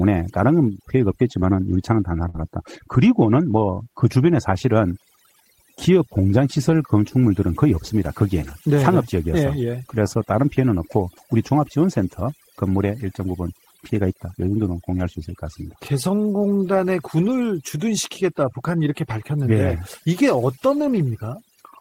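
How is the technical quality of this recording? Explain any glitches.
The speech has three problems: heavy noise processing throughout, one short dropout, and several brief rough patches.

Overdone noise removal runs for the whole clip. An over-aggressive suppressor cuts bands near its noise estimate, so the background collapses into twinkling specks.

A burst of packet loss hits at 2.29 to 2.36 s. The receiver extends the last sound for about 47 ms while fading it, producing a held buzz or hiss. About 40 ms of speech is then skipped.

A lost packet rebuilt from error correction occurs at 2.34–2.36, 8.43–8.49, 15.03–15.09, 17.19–17.33 and 20.77–20.99 s. The decoder substitutes low-bitrate backup copies, giving 20 to 120 ms of rougher, noisier sound with no gap.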